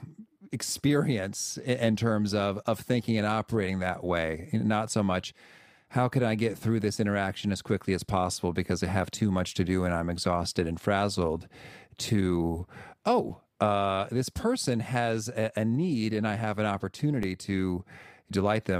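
At 13.30 s, just before "uh this person has", the speech freezes for about 5.3 ms in an underrun with held sample. The output buffer ran dry, and the converter held its last value, leaving a flat stretch. A repeat at 17.23 s, right after "and I have an", lasts about 2.7 ms. In both dropouts a few milliseconds of live audio were lost. The lengths fit buffers of roughly 256 and 128 samples.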